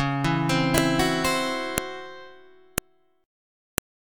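Sharp, loud clicks land at 0.78, 1.78, 2.78 and 3.78 s, one per 1.0 s piece: a file header played as audio, where header bytes left at each join decode as samples. The waveform shows brief spikes; the spectrogram shows thin broadband vertical lines.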